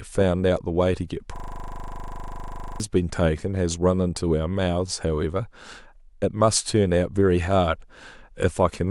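From 1.36 to 2.8 s the speech turns into a rattling 25 Hz buzz. This is a system hang loop: the system froze while the hardware replayed one 40 ms buffer.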